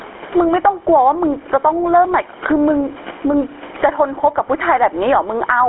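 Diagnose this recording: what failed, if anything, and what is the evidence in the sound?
The level is squashed, with loud and soft parts pulled closer together by a gain swing of around 20 dB, over room noise about 33 dB below the speech. This is gain pumping, likely from input gain set far too high, with a fast limiter clamping every peak.

At the codec stage, the speech is buzzy and gravelly throughout, confined to a telephone band of roughly 300 Hz to 3.4 kHz, with nothing above 3.8 kHz. This fits the GSM full-rate codec at 13 kbps, which rebuilds speech from a vocal-tract model driven by sparse pulses.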